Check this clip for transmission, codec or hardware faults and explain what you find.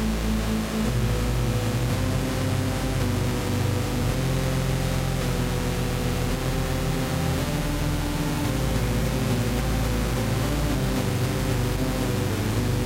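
One transmission fault is present: overlapping chunks, heard twice. At 4.02 s and again at 9.04 s, about 13 ms of audio plays a second time. The sound arrives in 5 s chunks, and each new chunk begins slightly before the previous one finished, so the seam duplicates a sliver of material. Each repeat comes across as a brief click or stutter. On a waveform the repeated segment shows as a small step where the signal jumps back. A spectrogram shows a thin vertical line at each join.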